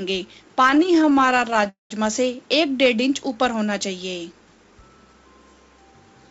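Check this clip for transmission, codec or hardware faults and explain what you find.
Two transmission faults occur, both jitter-buffer underruns, and the band stopping at 7 kHz fits a G.722 call path at 64 kbps.

Repeated stalls (stutter), 0.60 to 1.67 s: packets kept arriving late, so the buffer emptied 28 times and the receiver stretched the last sound, each gap 16 ms or shorter. The sound drags and judders, with about a quarter of the span filled in. Unlike a freeze, it is many tiny hitches rather than one hold.

Call audio freeze, 1.69 to 1.92 s: packets were likely held up in transit, so the receiver extended the last sound for about 212 ms, fading into roughly 150 ms of silence. The audio then resumes where it stopped, with nothing lost. Unlike the stutter, this is a single long pause.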